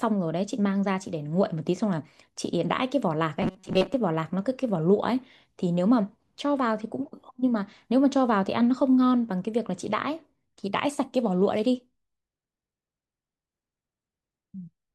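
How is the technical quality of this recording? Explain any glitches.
One glitch stands out, a robotic sound from repeated short buffers between 3.42 and 3.97 s. For just over half a second the speech turns into a stiff, metallic buzz at 188 Hz, still loosely tracking the syllables. The likely cause is new audio arriving too slowly, so playback kept looping a fragment of about 5.3 ms (one cycle of 188 Hz), with roughly half the real signal skipped. Unlike a dropout, there's no silence, and unlike a mains hum, the buzz exists only within this stretch.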